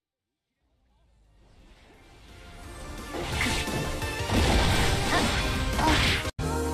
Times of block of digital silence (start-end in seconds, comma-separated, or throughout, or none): none